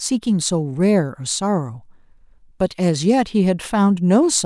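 No technical faults can be heard anywhere in the speech.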